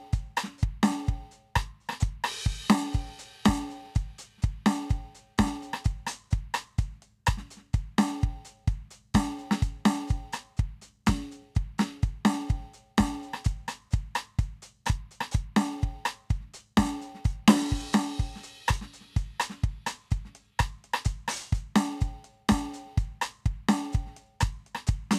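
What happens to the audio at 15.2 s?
Nothing goes wrong at 15.2 s; the music plays through that moment intact, with no dropout, click, distortion or other fault.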